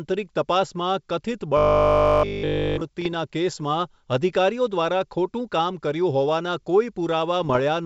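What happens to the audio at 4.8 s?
Nothing goes wrong at 4.8 s: the speech carries on intact, with the wideband G.722 telephone coding at 64 kbit/s passing it through as expected.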